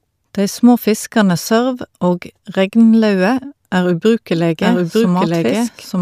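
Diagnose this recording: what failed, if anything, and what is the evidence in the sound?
A doubled audio track starts abruptly at 4.33 s, after "sørv og regnlaue er", and lasts to the end. A dry, full-band copy of the speech trails about one second behind at roughly equal level, likely from a second, slower capture path mixed in.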